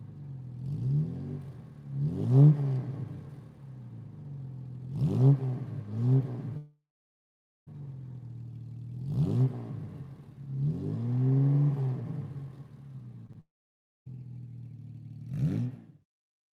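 From 6.57 to 7.69 s a long network dropout, likely caused by audio stopping in transit, leaves the last sound fading as a buzz or hiss into roughly 0.9 s of silence. About 1.1 s never returns. At 13.27–13.31 and 13.33–13.36 s, short concealed packet loss patches two 20 ms gaps with continued sound. Each is only a brief smear rather than silence. A second long network dropout follows at 13.40–14.08 s, about 0.66 s lost, mostly silent.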